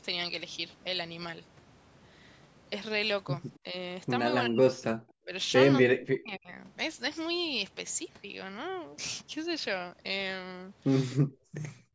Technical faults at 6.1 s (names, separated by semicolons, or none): speech suppressed in double talk